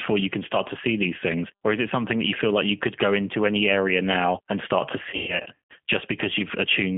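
Throughout, the speech carries G.729 codec damage: the band stops near 200 Hz and 3.4 kHz, and the sound is plainly rough and synthetic, consistent with an 8 kbit/s coder rebuilding each frame from a vocal-tract filter, pitch predictor and sparse pulses.

From 5.10 to 5.73 s, right after "now and start to", VoIP packet loss concealed by the speech codec appears. Roughly 360 ms of audio is missing across that 600 ms stretch, the longest gap being 150 ms. The decoder repeats its last pitch and filter at falling gain, so the sound turns into a fading buzz or coloured noise, and it stays weakened briefly after packets resume.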